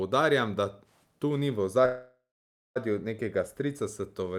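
At 1.85 s, right after "da tu ni v", a call audio freeze holds the speech for about 0.9 s until 2.78 s, likely from delayed packets draining the jitter buffer. A fading buzz gives way to 0.54 s of silence, a flat gap in the waveform and spectrogram. The speech then resumes intact, 0.9 s late.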